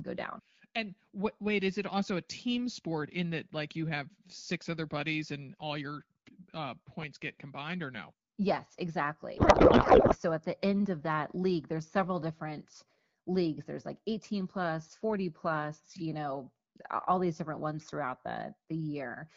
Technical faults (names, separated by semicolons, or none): codec payload misread